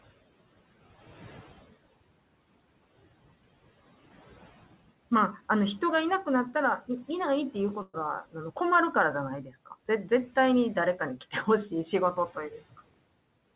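At 7.82 to 7.95 s a burst of packet loss occurs: the receiver stretches the last sound for about 113 ms, fading, with a brief dropout, and 120 ms of speech is skipped. At 9.44 to 9.72 s the noise suppressor cuts speech, taking quiet parts down by up to about 11 dB across roughly 150 ms, so they sound swallowed.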